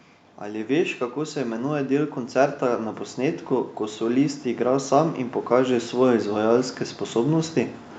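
From 0.4 s to 7.57 s the automatic gain rises: the control judged the input too quiet and kept raising its gain, by about 12 dB in total. Speech and background noise swell together steadily, while the call microphone processing leaves nothing above 8 kHz.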